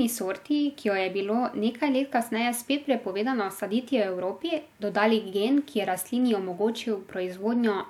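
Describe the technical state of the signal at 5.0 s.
At 5.0 s the speech signal is intact, with no audible technical fault at that moment.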